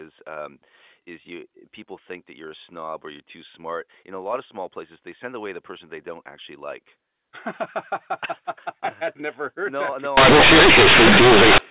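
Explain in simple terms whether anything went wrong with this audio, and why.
Yes, something went wrong from 10.17 to 11.58 s: companded audio read as linear. The telephone-coded A-law bytes were played as plain 8-bit samples without being expanded, so quiet and loud parts come out equally huge, giving harsh, buzzy distortion and heavy noise in pauses.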